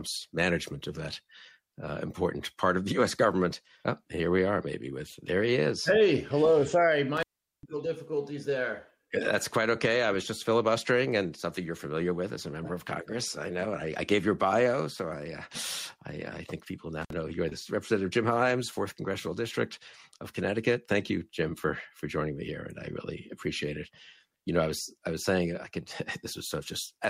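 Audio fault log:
7.17–7.63 s and 17.02–17.14 s, intermittent contact: the signal drops out twice, and crackle marks the edges of each gap. The first gap lasts about 0.40 s and the second about 56 ms. A loose plug or cable connection momentarily breaks the signal path, so the audio stops. As the contact scrapes open and closed, it produces the brief crackling bursts at the start and end of each gap.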